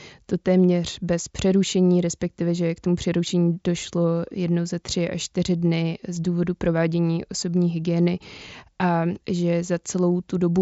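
Speech carried over a Bluetooth headset link, with concealed Bluetooth headset packet loss at 8.94 s: a single lost 7.5 ms frame was filled by repeating a matching stretch of the preceding waveform, so the gap is nearly inaudible. The mSBC wideband codec, which fits a bitrate around 61 kbps, passes speech up to 8 kHz with a light grainy texture.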